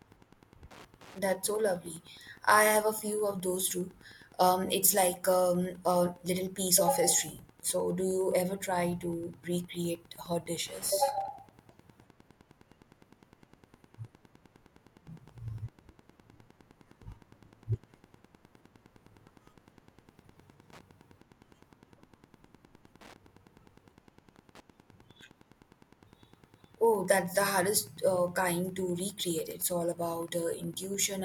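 A steady ticking runs under the speech from start to finish, about ten clicks a second and well below the voice: Wi-Fi interference, with a nearby radio's 102.4 ms beacon rectified by the audio circuit.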